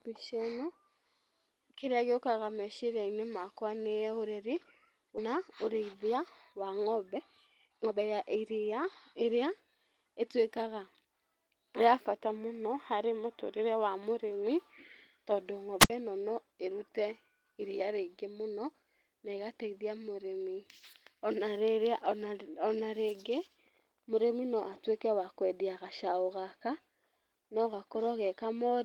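At 5.17 to 5.19 s a skip ahead drops roughly a second of speech; the waveform splices two segments with no silent gap, and the spectrogram shows an abrupt harmonic discontinuity.

From 5.27 to 7.20 s, then 7.67 to 10.22 s, jitter buffer speed-up trims pitch periods, running at 109% then 116%. Speech sounds hurried at unchanged pitch, with syllables compressed in time and harmonic spacing intact.

At 15.80 to 15.90 s a wireless microphone squelch dropout occurs: a brief broadband hiss smear, then about 64 ms of near-flat waveform before speech returns.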